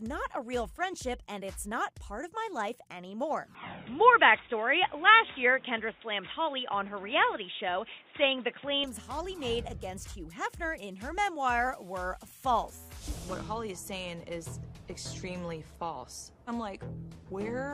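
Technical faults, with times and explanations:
3.55–8.84 s, input switched to a poorer device: the sound abruptly goes dull and boxy, with nothing above 3.8 kHz, a level jump of around 5 dB, and a fresh background hiss sitting roughly 35 dB under the signal. There's no gap at either change, and the full band snaps back at 8.84 s. That mix of narrower band, different loudness and a new noise floor is most likely the input hopping to another microphone or headset call profile and then back.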